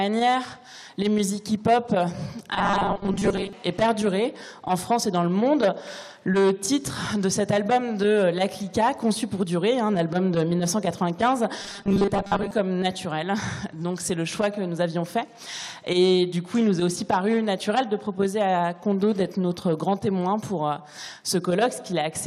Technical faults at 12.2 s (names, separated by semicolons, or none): robotic sound from repeated short buffers